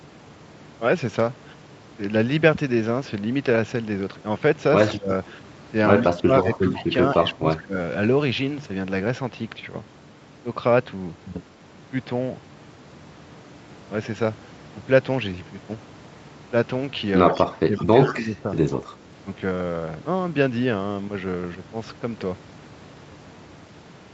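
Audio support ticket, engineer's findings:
Speech suppressed in double talk at 4.89–5.11 s, 6.01–7.76 s and 17.31–18.48 s. Level dips by up to about 20 dB, roughly a second in total per longer stretch. Likely echo canceller ducking the near talker while the far side speaks.

Echo leak at 6.04–6.09 s, 6.43–6.83 s, 17.34–17.44 s, 17.77–18.12 s and 18.71–18.77 s. A repeat of the voice, about 15–30 dB under the speech, trailing it by a constant 137 ms. The likely cause is residual loudspeaker echo getting past the loudspeaker side's canceller. The fixed delay marks it as a discrete copy rather than room reverb.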